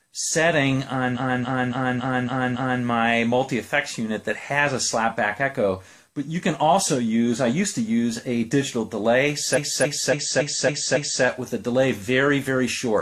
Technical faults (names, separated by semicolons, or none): repeated frames